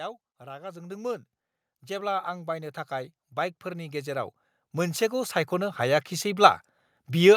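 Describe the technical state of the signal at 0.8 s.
At 0.8 s the signal is partway through an automatic gain rising event that runs from 0.38 to 1.33 s. The gain control has judged the input too quiet and is lifting its gain steadily, by about 5 dB in total, so the speech and the background noise swell together. On a waveform the envelope widens smoothly across that span; on a spectrogram every band, including the noise floor between syllables, brightens at once.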